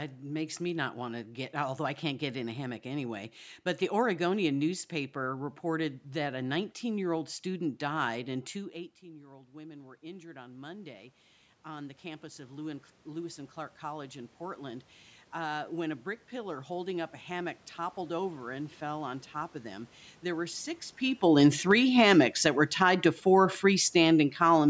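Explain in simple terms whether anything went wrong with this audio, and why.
The call's automatic gain rising kicked in at about 8.55 seconds, after the talker moved away from the microphone around 8.5 seconds and the voice dropped a lot. The system slowly turned itself up until 20.8 seconds, so the voice and the room noise behind it swell together over many seconds rather than staying steady.

Automatic gain falling follows from 21.22 to 24.64 seconds. Around 21 seconds the talker came closer again while the gain was still turned up, so the sound starts too loud. The system then gradually turned itself back down, and the voice and background sink together.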